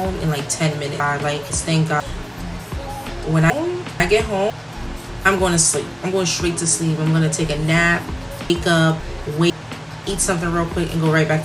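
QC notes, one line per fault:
1.0–2.0 s, 3.5–4.5 s, 8.5–9.5 s, chunks out of order: in each window one 500 ms chunk was delivered a chunk late and plays after its successor, so the two halves swap. Nothing is missing, but the sound jumps backward, with three hard joins.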